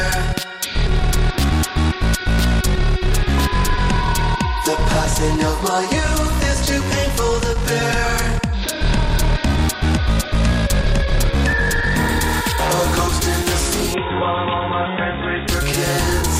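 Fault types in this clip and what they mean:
Input switched to a poorer device: From 13.94 s to 15.48 s the sound turns dull and boxy, with nothing above 3.8 kHz. It drops a few decibels in level and carries a faint new background noise well beneath the signal. The change happens with no gap at the switch. This likely comes from the system moving its input to a narrower-band microphone or a headset's call profile, which has its own tone, gain and noise.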